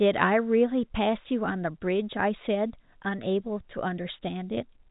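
Nothing's actually wrong here: it's just speech carried over ordinary G.711 telephone coding, so it tops out around 3.8 kHz the way a phone line does, and there's no fault anywhere in it to point to.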